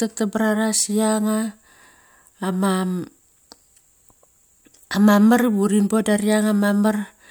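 Nothing stood out as a technical fault when listening to this speech recording.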